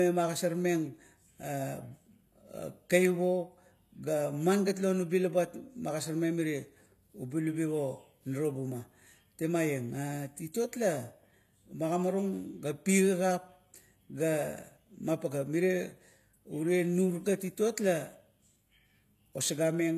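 HE-AAC compression, throughout: the treble is likely rebuilt from copied lower bands, so s sounds turn gritty, with nothing above 14.9 kHz, which fits about 24 kbps.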